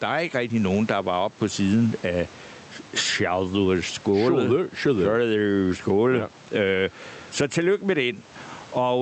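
From start to finish the speech has gain pumping, with the level swinging by roughly 15 dB, and the background room noise sits about 34 dB under the voice. The likely cause is mic gain cranked far too high, with a fast limiter or compressor clamping down on each loud syllable. That leaves loud and quiet passages squashed close together.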